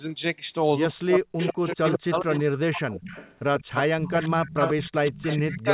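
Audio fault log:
0.93–3.13 s and 3.67–5.73 s, speech suppressed in double talk: the voice dips by up to about 40 dB and breaks up, for about one and a half seconds in the first stretch. This is likely an echo canceller turning everything down while both sides talk.
1.4–2.59 s, 3.09–3.64 s and 4.64–5.36 s, echo leak: a copy of the voice trails 134 ms behind. It sits about 10 dB below the speech, and about 20 dB below from 3.09 to 3.64 s. This is likely loudspeaker echo the canceller failed to remove.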